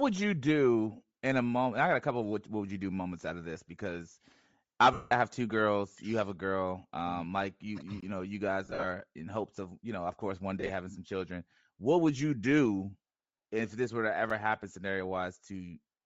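Speech throughout, with a breathy, grainy edge on the upper band and plainly audible codec damage. That's likely Bluetooth LC3 compression, where the top of the spectrum gets zeroed and noise-filled, and the texture fits 7.5 ms frames at around 32 kbps. There are lost LE Audio frames in three spots. From 4.93 to 5.12 s a solid 180 ms gap gets papered over with the last spectrum at random signs, so it smears into noise and fades. From 8.65 to 8.85 s the losses come scattered, with runs up to about 40 ms, and from 10.60 to 10.69 s they're shorter still, at about 30 ms at most. There are also two blocks of digital silence, where the output drops straight to zero and back with no fade. The one from 8.01 to 8.03 s is a 20 ms hole, and the one at 14.30 s lasts just 5 ms, so it comes across as a tick.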